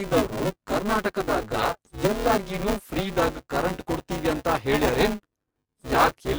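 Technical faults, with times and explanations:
Throughout, buffer tearing: the speech carries a steady robotic buzz at 200 Hz that rides on the sound and drops away in the gaps. The writer and the playback hardware have slipped out of step on a ring buffer, so in every 5 ms period something like 40 percent of the block is stale audio about 10 ms old. Hard joins on both sides of each stale stretch repeat at the buffer rate, producing the buzz.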